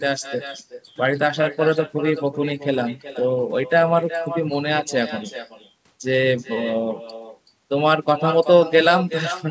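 With no echo canceller on the far end, its loudspeaker feeds back into its microphone and returns the talker's voice after the network round trip. Throughout the speech, every phrase is shadowed roughly 0.4 s later by a thinner copy about 12 dB quieter.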